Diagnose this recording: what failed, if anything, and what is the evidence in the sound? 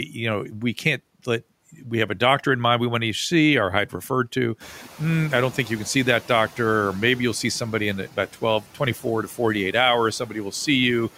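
Call processing is the culprit here: speech cut by the noise suppressor. Once the room noise climbs around 4.5 s, the suppressor treats soft speech as background, dipping it about 11 dB at 8.61 to 8.8 s and about 8 dB at 10.19 to 10.35 s, so those bits sound swallowed.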